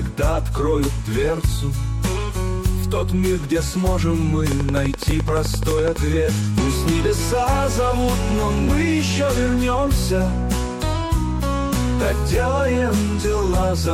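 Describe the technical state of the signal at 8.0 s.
At 8.0 s the signal is intact, with no dropout, clipping, distortion or other fault audible at that moment.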